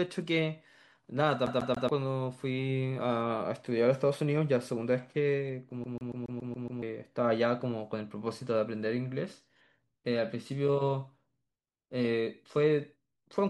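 At 1.46 to 1.89 s, and again at 5.84 to 6.82 s, the speech hits a CD stuck on one turn: a scratch keeps knocking the laser back a track, so a 140 ms slice replays three times, then seven, with tiny mutes at each jump.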